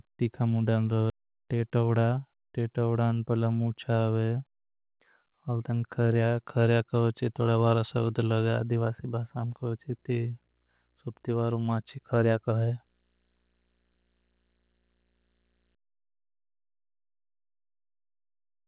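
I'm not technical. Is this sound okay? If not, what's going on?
No, the recording has three problems.

Skip ahead, at 1.1 s: right after "तीखा मुणडान", the speech jumps forward with no pause. About a second of talk simply never arrives, and the two sides are stitched straight together. This happens when a piece of the call is lost in transit, or thrown away because newer sound was already queued up and waiting to be played.

Jitter buffer speed-up, from 1.20 to 2.58 s: straight after that jump, the talking runs about 9% faster while the pitch stays the same, so it sounds rushed. The receiving side had built up too much stored sound and wanted to catch up, so it quietly snipped out many tiny slices, roughly 150 ms in total, to get back to its normal delay.

Video or display buzz, from 9.17 to 15.75 s: a faint buzz sits under the speech, repeating 59.94 times a second with a gritty hiss above it. 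This happens when a screen or video cable leaks electrical interference into the audio wiring. The buzz follows the rate at which the picture refreshes.

The narrow, phone-like tone, with nothing above 4 kHz, is normal for this kind of call connection.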